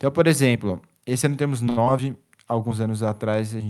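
Speech with two network faults close together. From 1.69 to 1.79 s there is a short stall from a late packet: the jitter buffer ran dry, so the receiver held the last sound for about 75 ms until the data arrived, then carried on from the same point. Nothing is lost, but a sound drags too long, and everything after it now plays about 75 ms later than before. That added delay and the intact content set it apart from a loss. Moments later, at about 1.85 to 1.88 s, comes a short concealed packet loss. Here roughly 20 ms of audio never reached the decoder, and only about 9 ms was bridged by extending the preceding sound before blending back into real audio. The result is a brief smear or wobble rather than a hold. Unlike the stall, something is genuinely missing, and the timing does not slip afterwards.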